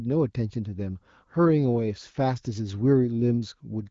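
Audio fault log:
Nothing stood out on listening to this speech clip.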